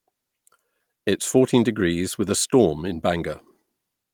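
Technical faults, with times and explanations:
No technical faults are audible anywhere in this recording.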